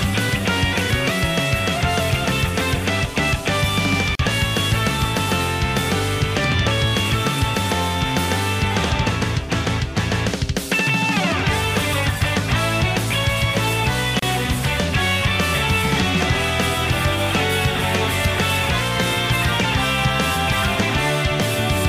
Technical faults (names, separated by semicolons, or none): gap at a join of encoded pieces